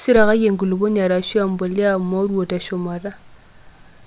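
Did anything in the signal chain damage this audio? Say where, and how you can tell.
No, nothing in this speech stood out on listening as a sign of damage anywhere in the signal chain.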